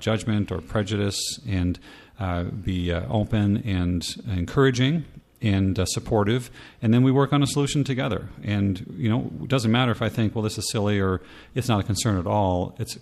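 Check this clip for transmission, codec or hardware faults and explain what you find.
Nothing faulty turns up anywhere in this speech.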